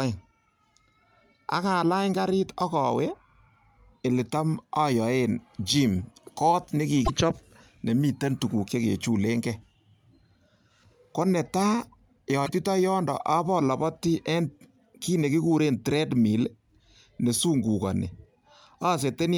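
At 7.04 to 7.10 s and again at 12.45 to 12.49 s, the speech skips ahead, and for 44 to 55 ms it comes out as a chirp, a burst of noise or a short hole. That span is roughly two frames of 26.1 ms each. The likely cause is a broken MP3 bit reservoir. Frames went missing, so the frames after each cut reached back into the reservoir for borrowed data and decoded bytes belonging to a different frame, until decoding resynchronised.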